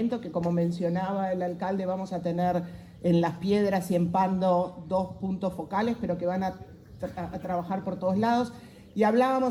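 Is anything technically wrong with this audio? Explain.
No, nothing is technically wrong with this audio.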